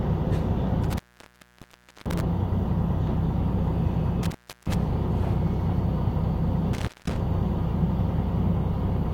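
Intermittent contact at 0.84–2.21 s, 4.23–4.74 s and 6.73–7.20 s: a loose cable or plug briefly opens, dropping the sound for about 1.07 s, 0.36 s and 0.20 s, with crackle at each edge and faint hiss in the gaps.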